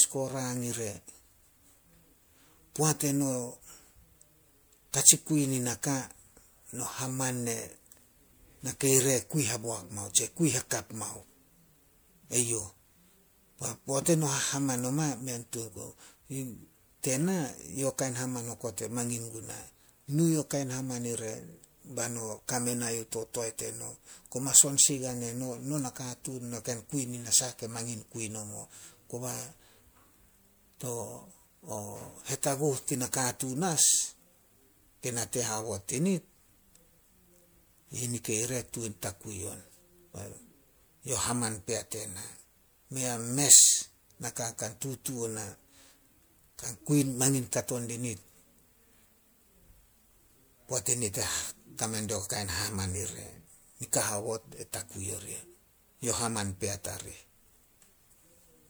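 Speech, with generation loss throughout: a swirly, smeared, hollow quality and blurred attacks, likely from about four passes through MP3 at roughly 128 kbit/s, with nothing above 20.9 kHz.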